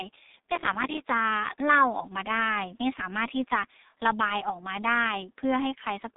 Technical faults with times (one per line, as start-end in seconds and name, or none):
0.00-6.16 G.723.1 codec